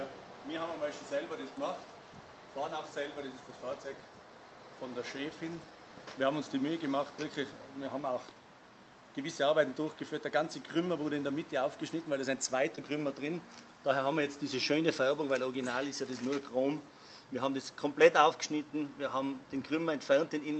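At 12.75 to 12.79 s there is a brief smear or wobble in the sound, lasting only a few hundredths of a second. This is short concealed packet loss: about 20 ms of the call did not reach the decoder in time, and the receiver covered the gap by extending the preceding sound for roughly 16 ms, carrying on its pitch or filling with shaped noise, before blending back into the real signal. The call path itself shows its codec character, with content ending around 8 kHz, which fits an Opus call at about 32 kbps.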